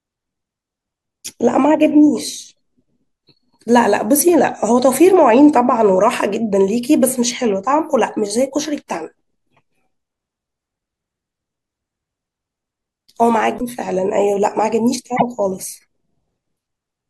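At 13.57 s and 15.16 s the speech jumps forward, leaving a brief chirp, noise burst or short hole of about 40 ms and 64 ms. This is likely a broken MP3 bit reservoir. Frames were dropped, and the next frames borrowed bytes from the wrong data, which fits 24 ms frames.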